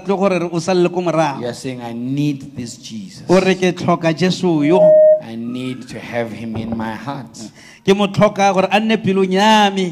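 At 4.58 s a steady tone near 620 Hz appears and swells over roughly a third of a second into a piercing squeal that stands around 10 dB above the rest of the sound, then cuts off at 5.25 s. This is loudspeaker feedback squeal: the microphone was picking up the loudspeaker it fed, and at 620 Hz the round-trip gain exceeded one, so that frequency kept reinforcing itself.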